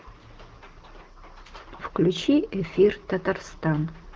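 No faults can be heard in this speech, which carries the character of an AMR wideband (HD Voice) codec at a rate where speech stays clear, with nothing audible above about 7.2 kHz.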